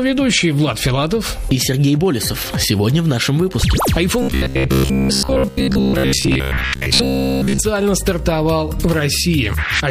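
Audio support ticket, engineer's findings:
Robotic sound from repeated short buffers, 4.22–7.61 s. Rigid metallic buzz at 66.7 Hz. Likely buffer underrun in the playback path: the last 15 ms of audio is looped for most of the span while new audio is skipped.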